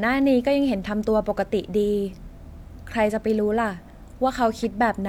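A short speech recording with no audible technical fault anywhere in the signal.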